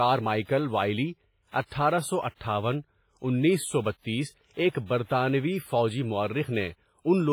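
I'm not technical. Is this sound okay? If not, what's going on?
No. WMA compression throughout the speech: it sounds ringing and washy with breathing hiss, likely from heavy data-squeezing that smears sound and drops quiet detail.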